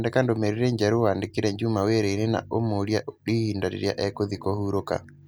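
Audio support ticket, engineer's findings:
No audible faults found in this speech recording. No dropouts, clicks, distortion or timing problems detected on listening.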